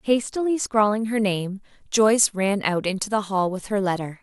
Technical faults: pre-emphasis left on

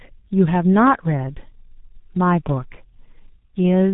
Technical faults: tandem speech coding

